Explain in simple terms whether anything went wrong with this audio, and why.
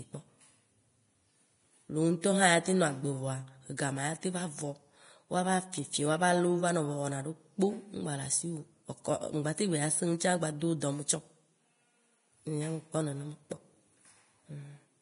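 Yes, something went wrong. The whole recording sounds hissy and grainy from start to finish. The speech has a rough, fizzy edge, and the start of each sound feels smeared. Nothing is heard above about 10.6 kHz, so the brightest part of the sound is simply gone. The likely cause is heavy Vorbis compression. Squeezing the file this hard forces the coder to throw away the top end and replace fine treble detail with noise.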